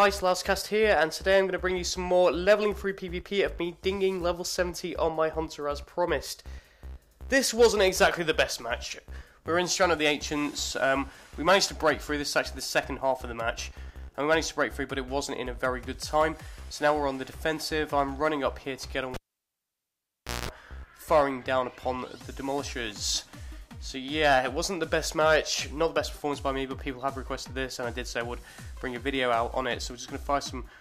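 At 19.14 s a cable is pulled and plugged in again while live. A sharp pop marks the break. The sound then drops to near silence for about 1.3 s. As the plug goes back, only its tip touches first. That briefly connects the signal conductor without a ground, so roughly 0.2 s of 60 Hz mains buzz comes through. A second pop follows at 20.49 s, when the plug seats fully and the sound returns.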